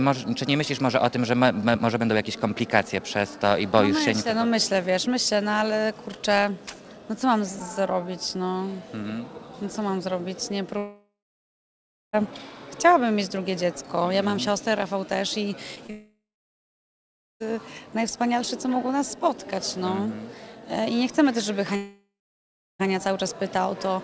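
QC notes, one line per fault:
10.78 to 12.15 s, long network dropout: about 1.36 s of audio never arrived, so the receiver stretched the last bit of sound into a fading buzz, and after a short while there's roughly a second of near-silence before things pick up again, with that chunk simply gone. Sounds like the link stalled for a moment, likely a network hiccup rather than anything at the source.
15.75 s and 15.86 to 15.91 s, short concealed packet loss: two tiny gaps, each about 20 ms, that the decoder papered over by extending the previous sound and crossfading back into the real audio. You hear them as a brief smear or wobble rather than a hole, and anything very short landing in those spots can get swallowed.
15.91 to 17.42 s, long network dropout: follows straight on from the second small gap, so the link was clearly struggling here. About 1.5 s went missing; the last sound carries on as a decaying buzz, then around 1.2 s of silence or faint steady noise before audio returns minus the lost piece. 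Again, likely the network dropping out for a stretch.
21.76 to 22.89 s, long network dropout: same pattern, a bit shorter. Roughly 1.04 s never made it, the fill fades out and leaves about 0.7 s of quiet, then the sound resumes further along with that part missing. Likely another network stall. Through all of this the audio sits on a G.722 call path at 64 kbps, so there's nothing above 8 kHz.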